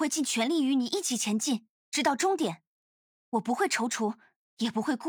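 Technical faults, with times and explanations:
No technical faults can be heard in this audio. There is nothing here that needs a time or an explanation.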